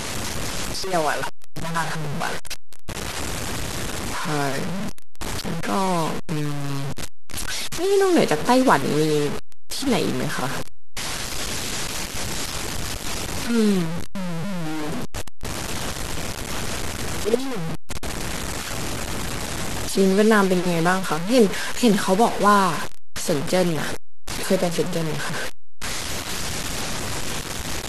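It's a speech clip with grainy, signal-following distortion through the whole thing, low bit depth without dither. The grit sits only about 10 dB under the speech, which fits a likely cause of roughly 5-bit truncation, so quiet tails crumble or sputter into silence.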